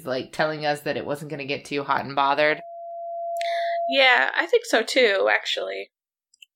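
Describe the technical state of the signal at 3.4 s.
At 3.4 s you're right in a loudspeaker feedback squeal (2.33 to 4.08 s): the mic is catching its own speaker, so a 684 Hz tone swells over about a second to roughly the speech's level.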